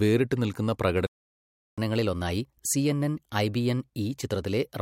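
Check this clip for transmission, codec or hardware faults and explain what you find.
Two linked playback faults are present: a gap in the speech followed by a stretch where it runs fast and high.

From 1.07 to 1.78 s the speech cuts out into silence for about 0.71 s, then picks up again. This is a playback stall, likely caused by the player running short of data or its output thread being blocked until it recovered.

From 1.78 to 4.78 s the speech sounds hurried and slightly raised, at about 1.1 times normal speed and roughly a semitone and a half higher, before returning to normal. This is catch-up at higher speed: the player resamples its buffered backlog faster to win back the time lost in the stall.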